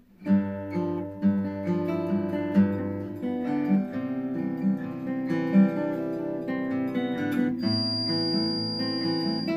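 From 7.57 s to the end, a feedback whistle sits behind the sound. It is a thin, steady tone at 4.8 kHz, roughly 5 dB below the signal, swelling and fading slowly in level. The likely cause is a loudspeaker-to-microphone loop held just at the edge of feedback.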